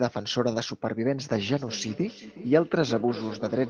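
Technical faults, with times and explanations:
1.48 to 3.70 s, feedback echo between two devices: from 1.48 s the speech returns at a fixed interval of roughly 0.4 s, each pass thinner and more ringing, the loudest about 14 dB below the direct speech. A second device in the room plays this call and the microphone recaptures it, and neither echo canceller removes the other device's output. Unlike room reverberation, the repeats are discrete and evenly spaced rather than a smooth decaying tail.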